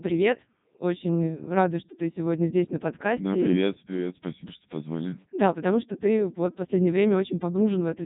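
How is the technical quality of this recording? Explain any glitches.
Quality is poor throughout: the whole recording has passed through the Codec 2 vocoder. Only pitch, voicing, energy and spectral envelope survive, and sine-wave resynthesis yields robotic, buzzy speech with nothing above 3.8 kHz. This fits its top 3.2 kbit/s mode. Unlike mere band-limiting, the waveform itself is rebuilt.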